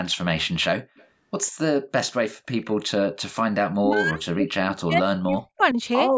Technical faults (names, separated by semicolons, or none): echo leak; speech suppressed in double talk